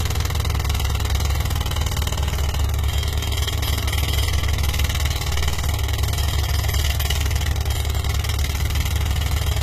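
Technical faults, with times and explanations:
Throughout, HE-AAC compression: the upper range sounds gritty and metallic, and nothing sounds above about 14.9 kHz. The damage is plainly audible. This is likely spectral band replication at a very low bitrate, which fits roughly 20 kbps. Only the lower spectrum is truly coded. The treble is rebuilt by copying lower bands upward under a coarse envelope, so its detail no longer matches the original and harmonics misalign across the crossover.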